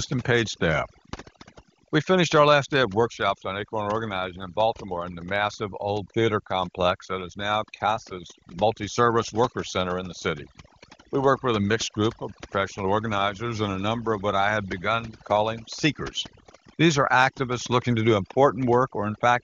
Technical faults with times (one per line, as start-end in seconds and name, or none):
0.00-19.43 overdone noise removal